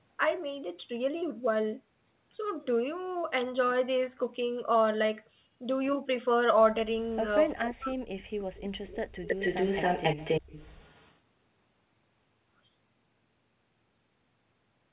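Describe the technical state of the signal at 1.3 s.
At 1.3 s the speech is intact, with no fault at that moment, only the narrow telephone-band sound of the call path.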